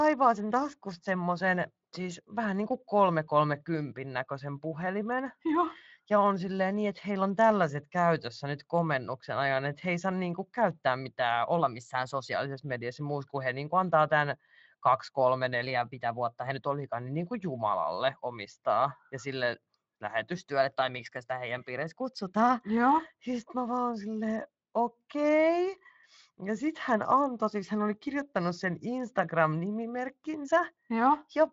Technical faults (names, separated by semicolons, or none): drift correction step